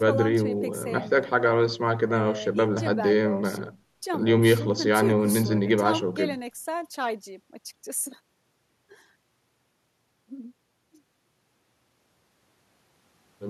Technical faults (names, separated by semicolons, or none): none